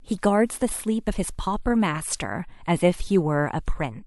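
No technical faults can be heard anywhere in the speech.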